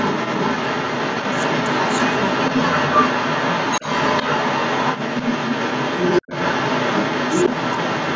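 From the start to the end at 8.15 s, a second voice runs under the talker. It sits roughly 10 dB above the talker's own level, so it often dominates. This is the other side's voice leaking through. The likely cause is an echo canceller that failed to strip the far end's playback out of the microphone signal. Both voices share the same band, with nothing above 8 kHz.

At 6.22 s the talker's voice drops out abruptly. The gap lasts about 70 ms, to 6.29 s, and the level falls by around 40 dB at its deepest. It is heard as a brief hole in the talker's sound while the leaking voice continues. This is speech suppressed in double talk. With both sides active at once, the canceller likely mistook the talker for echo and pulled the whole signal down.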